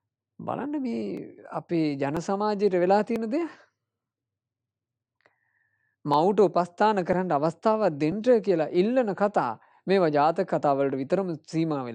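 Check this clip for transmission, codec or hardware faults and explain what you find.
One fault is present: overlap between stream segments, heard at 1.17, 2.17, 3.16, 6.14, 7.13 and 8.12 s. The audio arrives in segments about one second long whose timestamps overlap slightly, so the player trims the supposedly duplicated portion even though that sound was not actually repeated. A few milliseconds of audio are lost at each boundary and the waveform steps abruptly, producing a short click or micro-skip that recurs at roughly one-second spacing in two runs, with a gap between 3.16 and 6.14 s.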